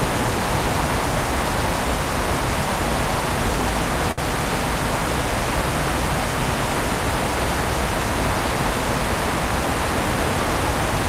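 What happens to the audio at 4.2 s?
Right around there, from about 4.11 to 4.20 s, there's a short stall from a late packet. The next chunk of audio didn't arrive in time, the jitter buffer ran dry, and the receiver stretched the last bit of sound for roughly 62 ms until the packet turned up. Then it picked up exactly where it left off, so nothing is lost. You just hear that sound hang on a touch too long, with a faint buzz or dip, and everything after it sits 62 ms later.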